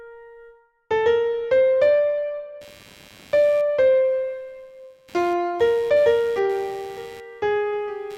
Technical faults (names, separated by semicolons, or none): computer activity noise